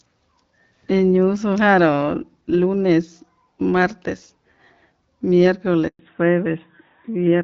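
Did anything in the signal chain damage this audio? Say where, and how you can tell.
Yes, and it's on the network side. At 5.87 s the speech cuts out and stays silent until 5.99 s, a 120 ms hole. That's a handover gap: the call hopped between networks and no speech frames arrived during the switch, so that stretch is simply gone.

Right after, from 5.99 s to the end, it's a fallback to narrowband. Up to then it sounds like lightly coded HD Voice, consistent with AMR-WB around 12.65 kbit/s. Afterwards nothing survives above 4 kHz and it turns duller and rougher, which points to AMR-NB at about 12.2 kbit/s.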